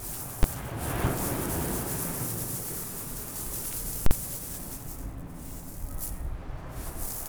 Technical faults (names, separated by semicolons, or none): invalid numbers at full scale